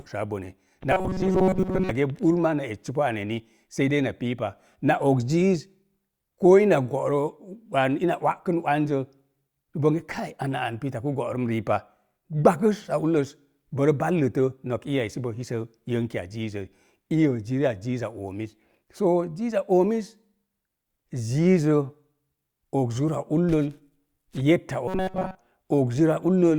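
From 0.91 to 1.91 s and again from 24.88 to 25.39 s, the speech collapses into a rigid metallic buzz near 188 Hz: robotic sound from repeated short buffers. This is likely a starved stream looping roughly 5 ms chunks, replacing most of the real audio.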